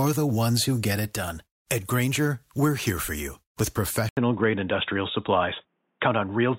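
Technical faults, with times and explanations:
4.09 to 6.59 s, input switched to a poorer device. The speech drops out for 80 ms, then returns duller and boxier. Nothing above 3.8 kHz comes through from that point to the end, so the air and sibilance are gone. A faint new background noise sits well below the speech. The level stays about the same. The likely cause is a change of input to another microphone or a headset's call profile, which passes a narrower band.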